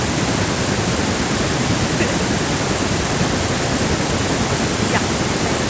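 No technical faults can be heard in this speech; the thin low end comes from the call's microphone processing, which is working as intended.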